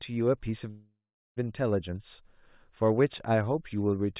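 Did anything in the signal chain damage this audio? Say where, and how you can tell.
Yes. From 0.70 to 1.38 s the speech halts, its last sound trailing off as a fading buzz into about 0.39 s of silence, then resumes exactly where it stopped with nothing lost. That is a call audio freeze, likely from delayed network packets emptying the jitter buffer.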